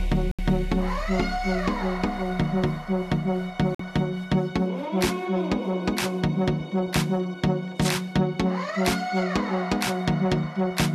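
Two brief digital broadcast dropouts hit the audio, at 0.31–0.39 s and 3.75–3.80 s, where the receiver mutes after a few bad frames, so that stretch is gone.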